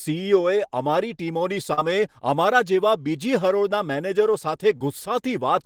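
At about 1.73 to 1.79 s, right before "અમારા જેવા", there's a short concealed packet loss: roughly 40 ms of the call arrived too late to decode, so the receiver stretched the preceding speech across the gap and faded back in, leaving a quick smeary wobble. It happens again at 4.77 to 4.81 s, where about 20 ms went missing and the patch is so brief it comes across as just a quick smear.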